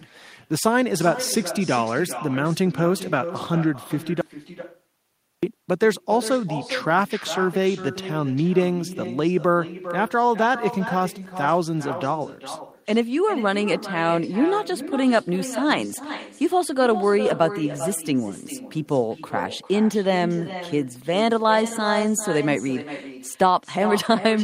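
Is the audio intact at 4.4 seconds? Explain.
No. At 4.4 s the clip is inside an audio dropout to silence running from 4.21 s to 5.43 s, about 1.2 s lost. The input was likely disconnected or muted while recording continued. The gap is silent with no room tone, unlike a noise gate, which leaves a faint floor.

On either side of the gap, the speech carries an echo with no canceller. The far end's loudspeaker feeds its microphone, so each phrase returns about 12 dB quieter, roughly 400 ms late. Unlike room reverberation, it is a distinct, thinner delayed copy.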